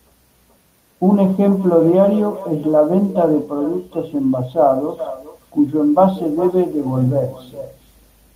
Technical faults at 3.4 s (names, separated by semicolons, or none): echo with no canceller